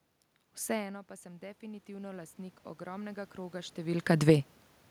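Speech recording with automatic gain rising from 0.80 to 4.17 s: after the level drops by about 19 dB, the gain control gradually adds about 11 dB, swelling voice and room noise together.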